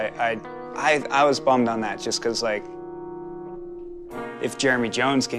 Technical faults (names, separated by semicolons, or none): none